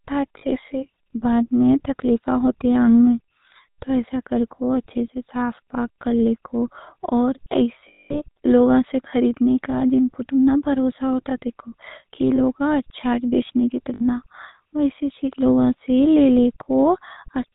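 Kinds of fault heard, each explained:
GSM full-rate codec: The whole clip of speech has gone through the old GSM full-rate coder at 13 kbps. It models the vocal tract and feeds it a sparse pulse train, so the excitation is thinned right down and nothing above 4 kHz survives. The damage is plainly audible. The voice has that buzzy, gravelly grain throughout, with a dull top end and a rough, synthetic edge on every syllable.
lost GSM frames: In four places frames went missing, and the decoder filled each gap by repeating the last good frame. That's why you hear a brief metallic, ringing smear instead of a clean gap. The short ones at 0.38 s (40 ms) and 12.36 s (20 ms, between "بھروسہ ہوتا دیکھو کہ" and "اچھا بیچنے کی") are just a rough blip. The 60 ms one at 13.94 s, right after "اچھا بیچنے کی", rings a little longer. The big one runs from 7.88 to 8.2 s, about 220 ms, just before "لوگا سے خریدنے کا", and there the held sound rings on through the gap.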